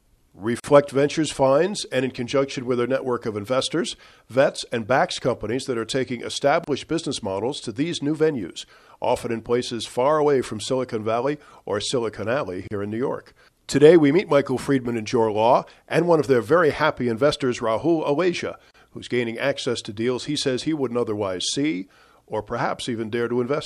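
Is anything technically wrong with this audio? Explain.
Yes, the speech has a gap at a join of encoded pieces, recurring every 6 s: at 0.60 s (43 ms), 6.64 s between "companies that are taking" and "business models to these", 12.68 s, and 18.71 s before "who's gaining access to" (each 34 ms). Each segment was encoded separately and joined with its encoder start delay and end-frame padding left in. The result is a dropout to silence with edges smeared by the codec, after which the speech resumes exactly where it stopped.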